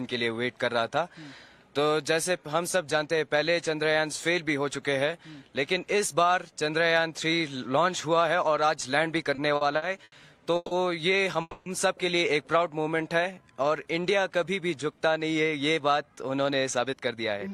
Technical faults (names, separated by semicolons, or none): repeated stalls (stutter); call audio freeze; jitter buffer slow-down; jitter buffer speed-up